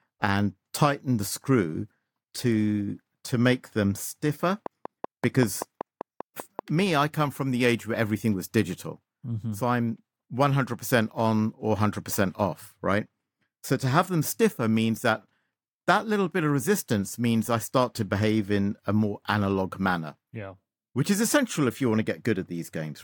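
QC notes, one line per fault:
4.66–6.60 s, train of clicks: between "to make them stiffer" and "me I come from", about ten similarly shaped clicks tick at a steady 5.2 per second, roughly 10 dB above the speech. Unlike random crackle, the even spacing points to likely nearby-equipment interference.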